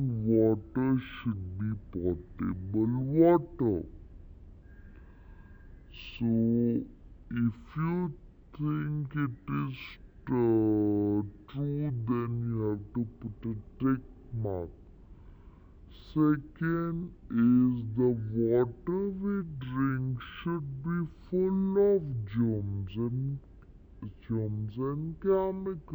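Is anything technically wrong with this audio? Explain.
Yes. Throughout the clip the sound crawls at half speed and sits a full octave (12 semitones) low, with a faint mirrored copy in the upper spectrum. This is stereo read as mono: alternating left and right samples were played back-to-back as one channel, doubling every duration.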